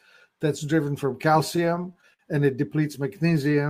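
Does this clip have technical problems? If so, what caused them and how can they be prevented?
Yes. From 1.51 to 2.21 s there are repeated stalls (stutter). Packets arrived late, so the jitter buffer kept running empty. The receiver stretched the last sound across ten short gaps, the longest 57 ms, dragging the audio without losing any. A steadier network with prioritised voice traffic would prevent this.

From 3.43 to 3.68 s a jitter buffer slow-down occurs. The receiver repeated pitch periods to refill its reserve, adding 42 ms. The sound plays at 86% speed, same pitch. Reducing late packet arrival would prevent this.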